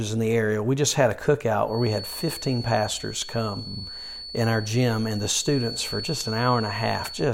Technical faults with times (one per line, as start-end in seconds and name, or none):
1.64-7.33 feedback whistle